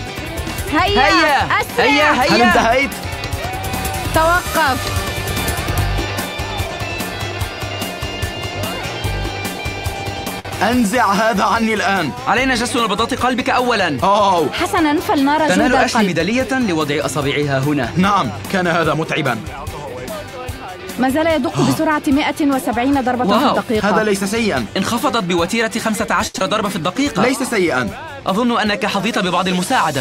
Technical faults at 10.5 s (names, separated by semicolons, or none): short stall from a late packet; short concealed packet loss